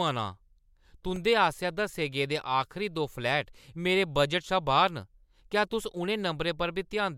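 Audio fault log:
1.16 s, repeated buffer: a brief click-like buzz interrupts the speech. New audio arrived late, so the device played its last block again, twice more. That block is about 1.3 ms long, which fits a 64-sample buffer. The same tiny slice sounds three times in a row with a hard join at each repeat. Repeats that short fuse into a buzz rather than a stutter. A few milliseconds of real audio are lost.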